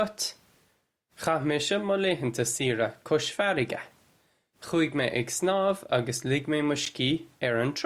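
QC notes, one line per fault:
6.85 s: block of digital silence. The audio drops to silence for 11 ms and returns with no fade, so the two abrupt edges merge into one tick. Unlike a lone click, the waveform shows a flat, near-silent run, not a single displaced spike.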